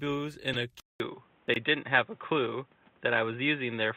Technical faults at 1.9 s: input switched to a poorer device

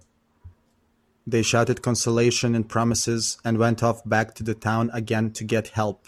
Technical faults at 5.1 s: none

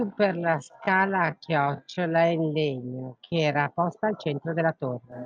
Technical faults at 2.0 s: time-stretched section

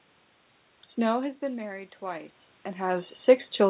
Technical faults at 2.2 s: automatic gain rising

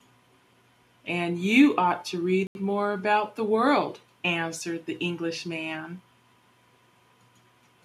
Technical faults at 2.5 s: Bluetooth stall

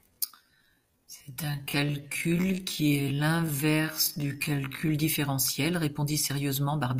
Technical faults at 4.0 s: time-stretched section

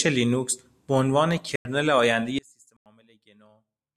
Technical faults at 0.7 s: none

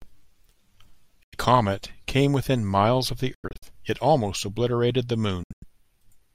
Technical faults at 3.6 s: Bluetooth dropout

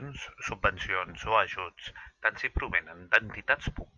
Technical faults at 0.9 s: none

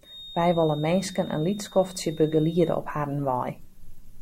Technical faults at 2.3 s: feedback whistle

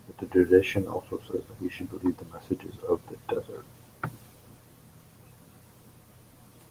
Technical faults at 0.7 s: none

